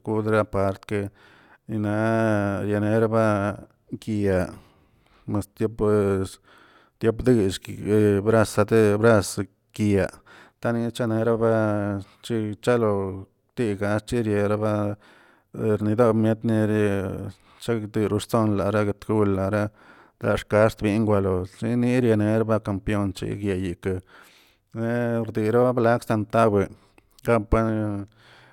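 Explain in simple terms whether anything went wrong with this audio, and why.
Nothing went wrong with this recording: the speech signal holds steady from beginning to end, with no audible technical fault anywhere along the way.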